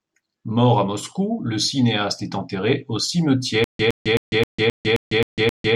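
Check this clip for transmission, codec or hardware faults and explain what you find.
One fault is present: stutter with silent gaps from 3.64 s to the end. A 114 ms fragment of speech repeats eight times at a steady 264 ms pace, each burst followed by about 151 ms of dead silence. The likely cause is a stalled stream or player that replays its last buffered fragment on each retry, then runs empty, so the speech due in that stretch never arrives.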